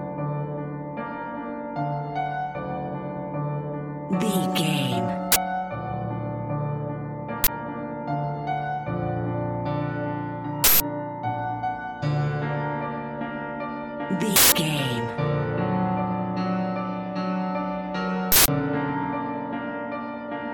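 Short, loud bursts of digital noise hit at 5.32, 7.44, 10.64, 14.36 and 18.32 s, each an uninitialised buffer: unwritten memory played as samples, in blocks of 40 ms at first, then 160 ms.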